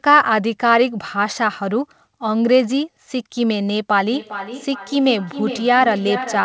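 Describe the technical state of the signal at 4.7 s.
At 4.7 s a feedback echo between two devices is under way, running from 4.12 s to the end at about 6.45 s. A second device replays this microphone's audio into the room, and that playback is picked up again, so each word returns roughly every 0.4 s, thinner and ringing, peaking about 10 dB below the speech.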